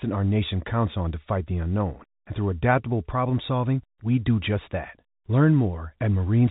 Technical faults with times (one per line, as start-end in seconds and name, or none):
none